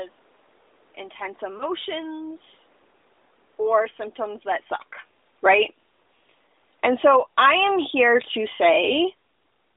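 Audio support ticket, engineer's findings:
Lost AMR speech frames: short dip and warble around 1.58 to 1.63 s. Sounds like a single 20 ms frame dropped over the radio link, failing its checksum. The AMR-NB decoder filled the gap by repeating the last good pitch and vocal tract settings at reduced gain, so you get a quick smeared blip rather than a hard gap. Speech recovers right after. Isolated event, fits a brief radio error, nothing systemic.

Automatic gain falling: level sags at 5.31 to 5.63 s, right after "or symptoms that suck", by about 8 dB. Bigger sag at 6.69 to 7.36 s, about 12 dB. The AGC decided input was too hot and pulled gain down gradually, so voice and room noise sink together. That shared drop in the background points to AGC, not the talker. The talker shift near 4.5 s is separate and genuine.

Automatic gain rising: recovery swells at 5.55 to 5.99 s, about 6 dB, and 7.28 to 8.12 s, about 8 dB. 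Each overlaps the tail of the preceding drop, so the AGC is hunting: cutting, then winning back only part of the level. Background rises with the voice each time, which is the giveaway. Net effect is audible pumping through roughly 5.3 to 8.1 s. Worth checking AGC attack and release settings or disabling it upstream.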